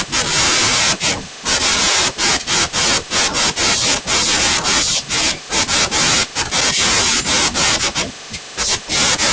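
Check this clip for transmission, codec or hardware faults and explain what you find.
One fault is present, and it runs through the whole clip. The resampler was restarted on every block. Each 50 ms block was converted on its own, likely going from 44.1 kHz down to 16 kHz. The block edges lacked their true neighbouring samples, so each edge carries a small error. The result is a steady 20 Hz tick, almost a buzz, heard under the speech and gone in the pauses.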